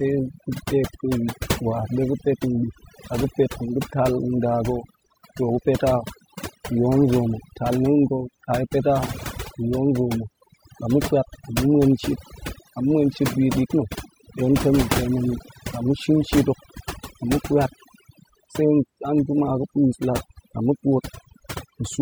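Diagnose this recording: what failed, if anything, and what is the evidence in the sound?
Overdone noise removal failed at the processing stage. Throughout the speech, the background drops and breaks up into twinkling specks. A noise reducer set too strong is switching individual frequency bands off, taking quiet parts of the voice with them.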